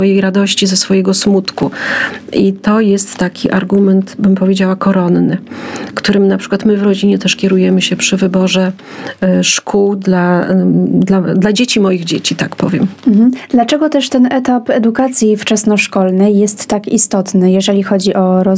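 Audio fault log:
Throughout, gain pumping: the level ducks by around 20 dB under each loud sound, squashing the dynamics, likely from gain set far too high with a fast limiter. The waveform looks flattened.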